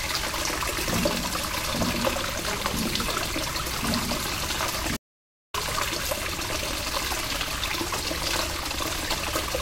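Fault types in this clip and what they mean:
Audio dropout to silence: At 4.97 s the sound just cuts out mid-flow and comes back at 5.54 s, leaving a gap of roughly 0.57 s that's dead silence, with no room tone or background underneath. That silent hole is the giveaway: the input was likely lost for a moment, through a link glitch, a device hiccup or a stray mute, while recording carried on writing silence. Whatever sound happened in that half-second is simply gone.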